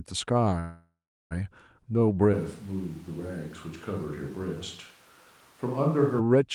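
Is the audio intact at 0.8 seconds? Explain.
No, a call audio freeze runs from 0.59 to 1.33 s, likely from delayed packets emptying the jitter buffer. The last sound is stretched into a fading buzz, then about 380 ms of silence. On a spectrogram this shows as smeared horizontal bands thinning to a blank gap. Speech resumes where it stopped, roughly 0.7 s late.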